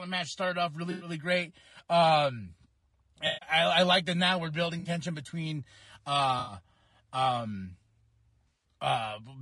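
The speech is grainy and rough from start to finish. Noise fills the gaps between the pitch harmonics, and the top band sounds thin and synthetic. This is plainly audible low-delay AAC compression, likely AAC-ELD. Its short frames cannot separate the harmonics finely, and at a rate that points to around 32 kbps there are too few bits to code them cleanly.

AAC frame loss with concealment then breaks in five times. The first is at 0.91 to 1.09 s, just after "match started off". The second is at 3.27 to 3.49 s. The third is at 4.79 to 4.89 s, after "that now we're building". The last two are at 6.39 to 6.53 s and 8.48 to 8.64 s. Each gap runs 60 to 140 ms. The decoder rebuilds the missing audio from the last good spectrum, so each patch sounds smeared, noisy or phasey.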